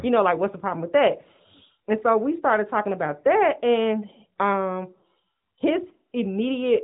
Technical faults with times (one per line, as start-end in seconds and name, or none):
none